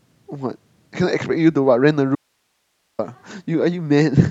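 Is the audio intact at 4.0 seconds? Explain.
Yes, the speech at 4.0 seconds plays through intact, with no dropout, click, distortion or other fault at that moment.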